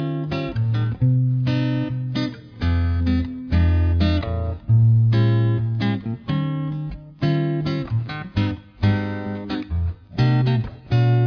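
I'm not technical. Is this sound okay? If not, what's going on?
Yes, it's fine; nothing here sounds broken or wrong.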